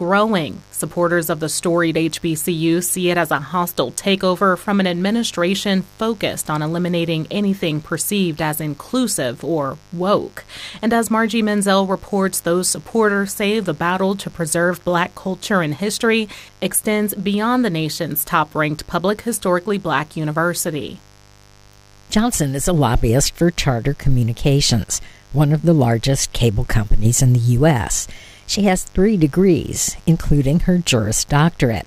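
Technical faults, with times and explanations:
Throughout, mains buzz: a steady, raspy buzz sits under the sound at roughly 30 dB below it. Sharp switching spikes from a dimmer, rectifier or unshielded lead enter twice per 50 Hz cycle, so the buzz pulses at 100 Hz, with harmonics of 50 Hz stretching up to several kHz. That gives it an edge rather than a smooth hum. A spectrogram shows evenly spaced horizontal lines stacked from 50 Hz upward, and the waveform shows small spikes every 10 ms in quiet gaps.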